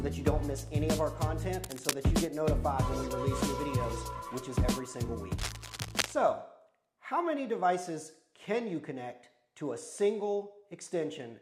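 Scratchy, rustling bursts break out over the sound from 1.64 to 1.94 s and again, longer, from 5.38 to 6.13 s, sitting only slightly below it. This is cable scratch noise, likely from a worn cable or connector whose contact resistance flickered while moved.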